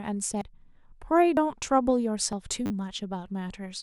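It's a short speech clip with two kinds of trouble. First, there are four quick skips at 0.41, 1.37, 2.33 and 3.28 s, each dropping around 40 ms of audio with the two sides butted straight together. That steady roughly once-a-second spacing points to audio missing between chunks, likely from a recorder or processor losing a sliver each time it closes one chunk and opens the next. Second, between 2.66 and 2.70 s there's a brief buzzy stutter where one tiny slice of sound plays several times over with hard joins. That's a repeated buffer: fresh audio didn't arrive in time, so the device kept replaying its last block. The rapid repetition fits a 10 ms buffer, and about 40 ms of real audio gets replaced in the process.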